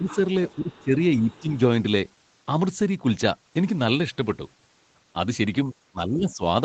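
A speech recording carried over a call, with its top end stopping near 8 kHz as a wideband call codec would leave it, and with two kinds of echo-canceller trouble. The first is speech suppressed in double talk: the talker's level dips at 0 to 0.09 s, 0.55 to 0.92 s, 1.17 to 1.49 s, 5.64 to 5.75 s and 5.91 to 6.42 s. Most of these drops are around 10 dB, the one near 5.7 s is shallower, and the final one reaches roughly 15 dB. The likely cause is the canceller hearing both ends active at once and ducking everything rather than separating the near talker from the loudspeaker echo. The second is the other side's voice leaking through: a faint second voice comes through at 0.09 to 0.19 s at about 15 dB under the speech, then more faintly, around 30 dB down, at 0.49 to 0.84 s and 1.30 to 1.39 s. This is likely residual loudspeaker echo the canceller failed to remove, and it overlaps the ducked stretches early in the clip.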